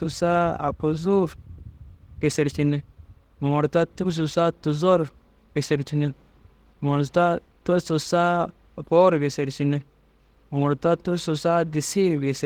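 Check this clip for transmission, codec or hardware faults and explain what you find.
Nothing faulty can be heard in this speech recording.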